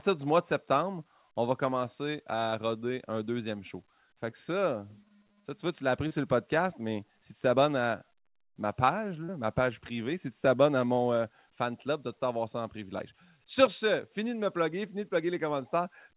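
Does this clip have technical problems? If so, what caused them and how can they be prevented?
Yes. Short concealed packet loss: packets missed the decoder at 2.5, 4.3, 6.08 (after "vois tu l'as appris") and 9.24 s, and concealment stretched the preceding sound across each 20 ms gap, 40 ms at 9.24 s, leaving brief smears or wobbles. A steadier network or deeper jitter buffer prevents this.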